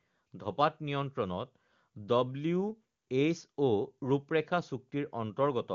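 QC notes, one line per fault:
No faults found in this speech clip. The AMR wideband (HD Voice) codec can be heard in the band limit, with nothing above about 7.3 kHz.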